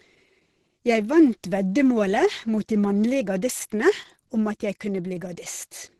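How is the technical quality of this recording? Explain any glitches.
Quality is poor: heavy codec damage runs through the whole recording. From start to finish, the speech carries the marks of Opus compression, likely in its hybrid mode at a low rate that fits around 12 kbps. A speech coder handles the low band, while a thin transform layer covers the top, which stops at 12.2 kHz. The result sounds muffled, hoarse and grainy.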